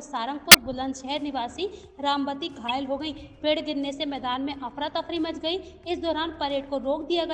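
Two short bursts of decoded garbage cut into this audio, the work of a corrupt frame decoded: a loud burst peaking around -5 dBFS from 0.51 to 0.58 s, then a softer one from 2.67 to 2.70 s. Damaged compressed data was played anyway, misplacing energy across a few frames' worth of time.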